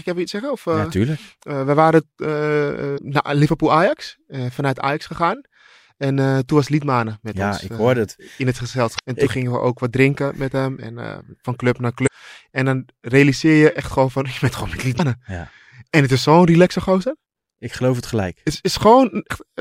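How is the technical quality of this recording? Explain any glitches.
The recording has five brief glitches, all of the same kind. Damaged data in a compressed stream occurs at 2.94–2.99, 8.95–9.00, 12.03–12.08, 14.96–15.00 and 19.27–19.31 s. Corrupted bytes make the decoder misread frames and then resynchronise at the next frame header, producing a short chirp or squawk of about 45 ms each time.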